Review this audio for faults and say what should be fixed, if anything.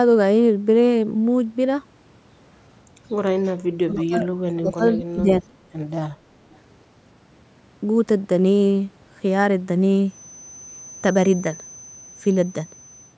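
Speech suppressed in double talk, 3.79–4.28 s and 4.47–5.52 s: the speech dips by up to about 25 dB for roughly 0.4 s in the first stretch and most of a second in the second. The likely cause is an echo canceller that, with both sides talking at once, could not tell this talker from the returning loudspeaker signal and attenuated everything.

Echo leak, 6.52–6.58 s: a brief, faint scrap of delayed speech comes back 303 ms late at about 35 dB below the main speech. This is likely residual loudspeaker pickup that the loudspeaker side's echo canceller failed to remove before sending it back.

To prevent both, use headsets instead of loudspeakers, or tune the echo canceller for better double-talk detection and stronger residual echo suppression.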